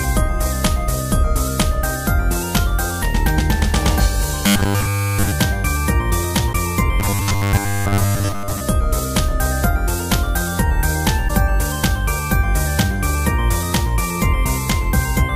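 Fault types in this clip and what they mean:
Robotic sound from repeated short buffers: From 4.47 to 5.32 s and again from 7.0 to 8.61 s, the sound turns into a rigid, metallic buzz locked at 100 Hz. That pitch fits a 10 ms stretch of audio being replayed over and over. The likely cause is new audio arriving too seldom, so the player keeps looping its last buffer while real audio is skipped. In the first span everything is repeated. In the second, most of it is.
Damaged data in a compressed stream: Two brief glitches occur, at 6.49 to 6.55 s and at 11.25 to 11.30 s, each about 50 ms long. Part of the encoded data is wrong at these points. The decoder misreads or rejects those frames and loses sync. It then searches for the next valid frame header before playback resumes. Each glitch is heard as a chirp, squawk, click or short hole that breaks the flow of the sound.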